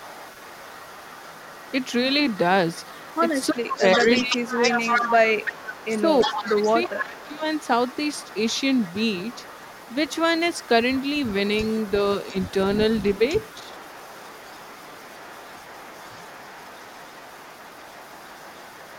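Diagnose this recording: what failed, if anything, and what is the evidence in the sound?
Echo leak, 0.0–2.39 s, 2.7–10.17 s and 10.52–18.99 s: a copy of the speech trails it by 347 ms. It sits about 25 dB down, but is louder, about 10 dB down, from 2.7 to 10.17 s. This is a call-processing fault: an echo canceller likely passed loudspeaker pickup back.

Speech suppressed in double talk, 3.52–5.45 s and 5.96–7.44 s: the main speech dips in pieces, by up to about 15 dB and then about 20 dB, over roughly 1.5 s and 0.7 s. This is also in call processing: the canceller likely mistook overlapping talk for echo and attenuated it.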